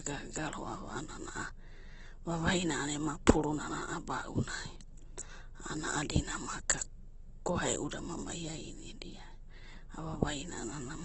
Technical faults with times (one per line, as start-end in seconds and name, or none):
0.00-11.04 Opus compression